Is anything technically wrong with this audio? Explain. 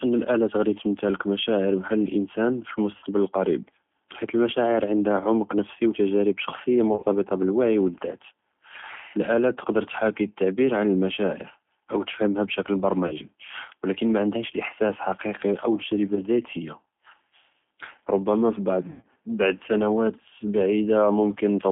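Yes. The whole recording carries G.729 codec damage, and five short stretches show VoIP packet loss concealed by the speech codec.

Throughout, the speech sits in a narrow band from about 200 Hz to 3.5 kHz and sounds plainly rough and synthetic. That fits G.729A at 8 kbit/s, which rebuilds each short frame from a vocal-tract filter, a pitch predictor and a few pulses. Unlike simple telephone band-limiting, which only dulls the sound, this adds a grainy, buzzy texture to the voice itself.

Packet loss is concealed at 2.97 to 3.06 s, 6.93 to 7.06 s, 13.07 to 13.13 s, 16.15 to 16.21 s and 18.90 to 19.05 s. About 60, 90, 30, 20 and 130 ms of audio is lost in these five stretches. At 6.93 s the loss is scattered over about 120 ms. At 18.90 s it is mostly one 110 ms run. In each stretch the decoder repeats its last pitch and filter at falling gain, so the voice smears into a fading buzzy tone or coloured noise instead of going silent or clicking as a plain dropout would. 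It also stays weak briefly after the audio returns.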